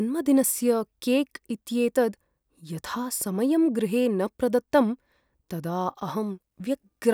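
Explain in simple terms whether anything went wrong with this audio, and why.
Nothing went wrong here; the speech comes across just as it should, with no glitches or problems to point to anywhere along the way.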